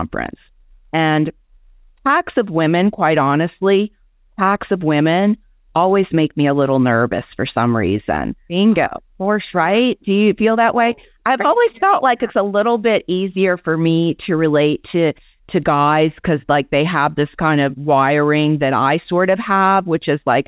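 The speech comes through a WebRTC call path with no technical faults, its band ending at 4 kHz in the way the G.711 mu-law call codec limits it, along with that codec's ordinary coding noise.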